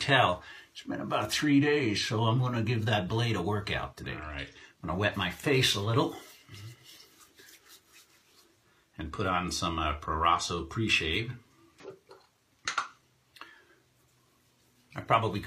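At 11.80 to 11.85 s there's a case of compressed frames skipped. Some compressed frames never got played, either lost from the file or thrown out by the decoder as corrupt, so the audio leaps forward by roughly a tenth of a second. It comes across as a jump, with a bit of the sound simply missing.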